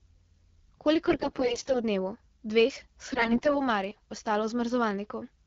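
From 1.08 to 1.83 s and again from 3.11 to 3.66 s, AMR bit errors make the speech hoarse, scratchy and gargly. Corrupted low-priority bits, more at the second burst, misplace excitation pulses while pitch and level hold, unlike packet loss, which mutes or repeats.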